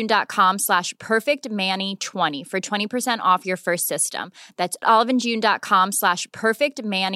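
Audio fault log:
No faults are audible anywhere in this speech recording.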